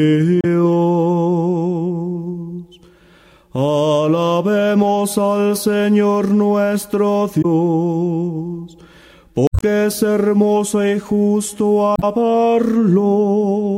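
Damaged data in a compressed stream appears at 0.41–0.45 s, 7.41–7.45 s, 9.47–9.63 s and 11.94–12.03 s. Corrupted bytes make the decoder misread frames and lose sync while it hunts for the next header, producing brief chirps or squawks in the audio.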